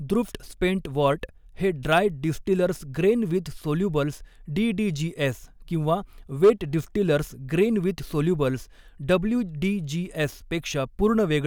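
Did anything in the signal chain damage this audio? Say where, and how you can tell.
Yes. Hard clipping damages the speech from 6.44 to 6.50 s, just after "डीडीजीएस किंवा". For those 64 ms the signal was driven about 5 dB past the ceiling of a converter or fixed-point format, so the peaks were sliced flat and a brief harsh crackle is heard. On the waveform the peaks sit as flat plateaus. On a spectrogram the flattened tops show as a short vertical smear of harmonics reaching far up the spectrum.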